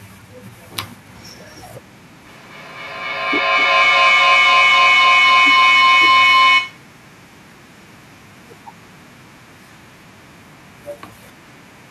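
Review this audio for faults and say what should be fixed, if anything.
A feedback howl runs from 2.25 to 7.18 s. A second device in the room loops sound back into the microphone, gaining each trip. It narrows to around 1 kHz, pulses roughly every third of a second, and peaks about 29 dB above the speech. Mute one device in the room.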